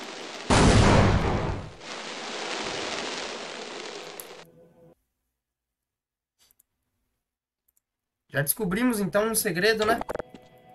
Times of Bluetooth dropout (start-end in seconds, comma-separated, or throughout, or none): none